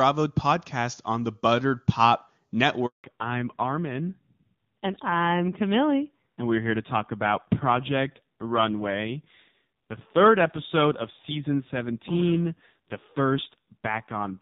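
At 2.86 s the speech cuts out for 180 ms, ending at 3.04 s: a handover gap, where the call is passed between networks and no speech frames arrive until the new link takes over. The sound dies within a few tens of milliseconds rather than stopping mid-waveform with a click, and the silence is clean and unbroken. That sets it apart from packet loss, which leaves short, scattered dropouts or smeared concealment.

From 3.04 s to the end the call falls back to narrowband. Before the gap, the wideband HD Voice sound is clear, with faint or no coding damage, which fits AMR-WB at about 23.85 kbit/s. After it, nothing above 4 kHz remains. The voice turns dull and boxy, with a rough, buzzy edge that points to a low-rate AMR-NB mode near 5.9 kbit/s. Unlike a simple low-pass filter, the change arrives all at once at the handover and comes with added codec roughness, not just lost treble.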